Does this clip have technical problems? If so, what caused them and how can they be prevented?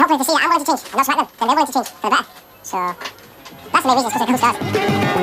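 Yes. The whole clip is audio read two samples at a time (double speed): each pair of samples was taken as one frame, so everything plays 2x fast and 12 semitones higher. On a spectrogram all content sits an octave up and the waveform looks compressed in time. Prevention: confirm channel count and sample width before decoding.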